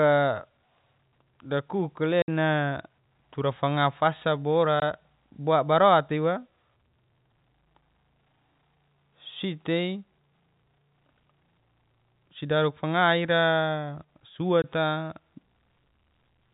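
At 2.22–2.28 s, after "tura fanga fasa" at 4.80–4.82 s, and at 14.62–14.64 s, the telephone-band speech drops into dead silence from packet loss filled with silence. The 60 ms and 20 ms gaps fit 20 ms packets, and they have hard edges.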